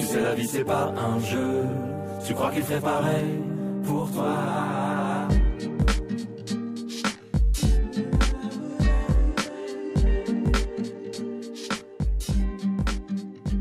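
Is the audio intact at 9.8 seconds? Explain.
No, there's channel delay (comb filtering) from 3.20 s to the end: one channel runs around 20 ms late, and the mono sum sounds rough or slightly doubled.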